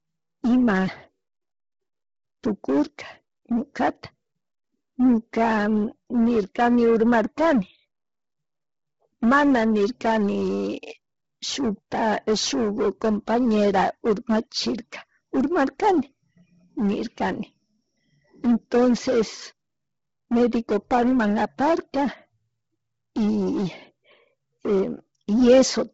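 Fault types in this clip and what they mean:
Bluetooth LC3 compression: The speech was likely sent through Bluetooth LE Audio's LC3 codec at a low rate, fitting about 16 kbps in 10 ms frames, which discards upper spectrum and fills the gaps with noise. Throughout, nothing remains above 7.7 kHz, and the speech sounds heavily breathy and grainy.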